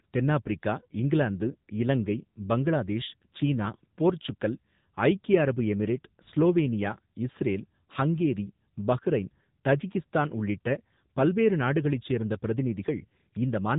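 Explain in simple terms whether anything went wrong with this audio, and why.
The whole clip has passed through the AMR narrowband mobile codec, the one used for older mobile phone calls. Everything above 3.8 kHz is gone, so the speech sounds muffled. The codec rebuilds the voice from a simple model, and that damage is plainly audible.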